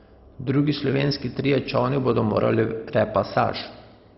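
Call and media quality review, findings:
MP2 compression, throughout the speech. Dull top end, nothing above 5.6 kHz; gurgling, granular texture. Likely low-rate Layer II encoding, consistent with roughly 32 kbps: upper sub-bands starved of bits and switched off, remaining bands coarsely quantised and flickering.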